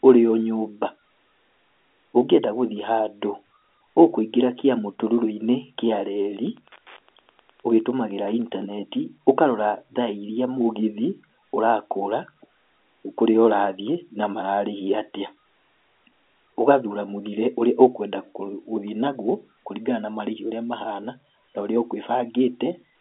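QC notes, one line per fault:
6.31–8.78 s, Wi-Fi interference: a steady ticking about ten times a second sits faintly under the speech, well below its level. A nearby Wi-Fi radio's beacon, repeating every 102.4 ms, is being picked up and rectified by the audio circuit, so each transmission lands as a small click. It stays audible despite the telephone band, which cuts everything above 3.8 kHz, because the clicks carry energy inside the passband.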